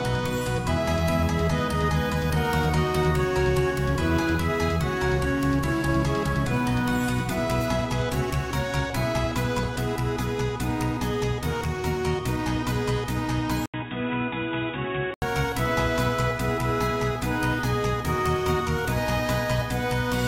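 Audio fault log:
13.66 to 15.22 s, input switched to a poorer device. An 80 ms silence opens the section. The sound then turns dull and boxy, with nothing above 3.8 kHz. It also drops a little in level and carries a faint new noise floor, far below the signal. At 15.22 s the full band returns. The likely cause is the input moving to a narrower-band microphone or a headset call profile and then back again.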